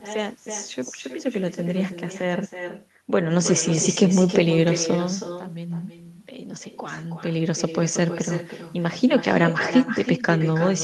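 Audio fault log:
throughout, echo with no canceller: far-end loudspeaker audio reaches the microphone unremoved, so the speech returns about a third of a second later as a thinner copy about 9 dB down.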